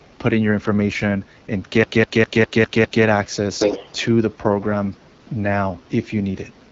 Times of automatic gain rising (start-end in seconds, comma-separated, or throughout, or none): none